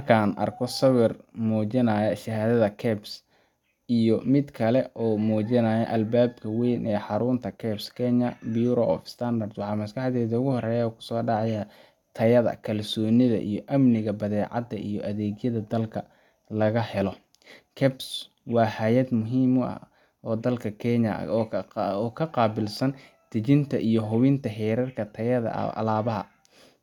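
No technical faults can be heard anywhere in this speech recording. Nothing in the audio stands out as a problem at any point.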